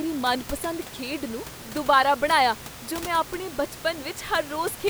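No technical faults can be heard in this recording.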